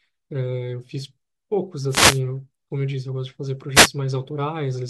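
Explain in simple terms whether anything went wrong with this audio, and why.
Two wireless microphone noise hits, at 1.88 to 2.21 s and 3.74 to 3.89 s: the radio signal briefly fades, so a swish of static is heard rather than silence.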